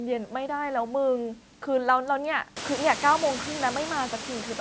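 No technical fault is present: the speech has passed through normal call microphone processing with nothing above 8 kHz, and the room noise climbs by about 24 dB at around two and a half seconds, after which it sits about 12 dB below the speech.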